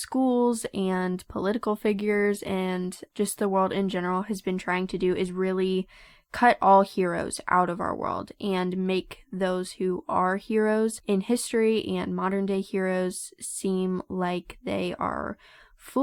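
From 0.92 to 4.92 s, an adaptive stream at a lower bitrate: codec artefacts abruptly rise, fitting a 64-to-32 kbit/s Opus switch, recovering before "do is really cut" without any gap, unlike a dropout.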